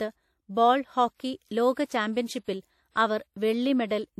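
Throughout the speech there is plainly audible coding damage of the kind left by a low-rate transform codec, likely WMA compression from an early encoder version. Quantisation noise is spread over long blocks, so the speech carries a washy, ringing hiss that swells and fades with the signal level. The content stops at about 17.3 kHz, and the overall degree of damage fits a bitrate around 48 kbps.

From 1.86 s to 1.90 s there is pre-echo ahead of a sharp onset. The attack sits late in a long transform block, so the noise sized for the loud part is smeared back through the quiet gap before it, about 43 ms in all. It is heard as a brief hiss leading into the attack, which itself sounds softened and less crisp than it should.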